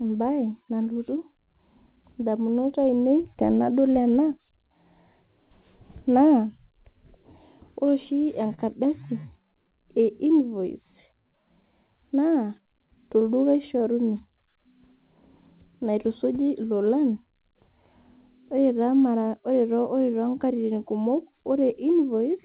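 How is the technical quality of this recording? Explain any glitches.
There are three small glitches, all from the call path's jitter buffer: two brief stalls and one quick speed-up. The band stops at 4 kHz, which fits a G.711 A-law call codec at 64 kbps.

At 8.54 to 8.60 s and again at 13.79 to 13.83 s there's a short stall from a late packet. The buffer ran dry, so the receiver stretched the last sound, 37 ms the first time and 16 ms the second, then carried on where it left off. Nothing is missing, but the sound hangs a touch too long with a slight buzz or dip.

From 12.58 to 12.97 s you get a jitter buffer speed-up. Too much audio had piled up, so the receiver snipped out tiny pitch-period chunks, about 50 ms in all. That section plays at 112% speed without any pitch change, so it comes across a bit rushed.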